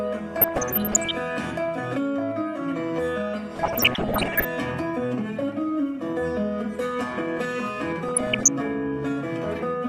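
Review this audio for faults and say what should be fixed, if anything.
DAB burbling from 0.37 to 1.15 s, 3.54 to 4.45 s and 8.08 to 8.48 s: short blips of noise where bit errors, around 0.7 to 1.5 percent, slip past error correction into the MP2 data, so scale factors misfire and single sub-bands jump in level for up to a frame. Improving reception with a better antenna, placement or a stronger multiplex would stop it.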